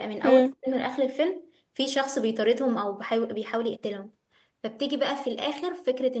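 From 0.41 to 0.68 s, the echo canceller likely mistook both ends talking at once for loudspeaker echo and clamped the near side. The result is speech suppressed in double talk: the speech sinks by roughly 40 dB, nearly to silence, for about a third of a second.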